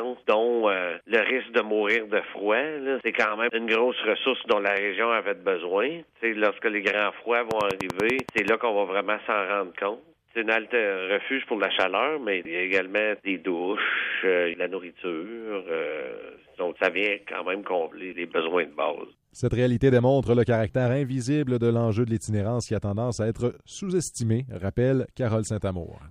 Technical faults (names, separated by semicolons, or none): train of clicks